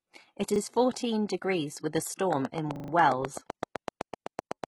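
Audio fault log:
Throughout: HE-AAC compression, likely, with heavy codec damage. Nothing is present above 11.8 kHz. The treble below that edge is rebuilt by spectral band replication, so it is copied upward from lower bands and shaped only by a coarse envelope rather than carried over from the original. Its harmonics therefore fail to line up with the real ones across the crossover, and sibilants come out gritty, metallic or lispy. The extent of the damage fits a low bitrate around 16 kbps.
0.56–0.6 s and 2.76–2.92 s: repeated buffer. Fresh audio failed to arrive in time, so the same 40 ms piece was played again with a hard join at each repeat. At 0.56 s, just before "fourteen degrees with a", it sounds twice in total, giving a short stutter. At 2.76 s it sounds five times in a row, producing a longer stutter. No audio is skipped at either point, so the material after each repeat simply resumes.
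2.33 s to the end: train of clicks. Just after "fourteen degrees with a", near-identical pulses begin at a regular 7.9 per second and continue to the end of the clip. They reach about 15 dB above the signal, so they tick over the sound and through its pauses alike. A steady, evenly spaced pulse like this points to a likely cause in interference from nearby equipment or a faulty connection or power supply.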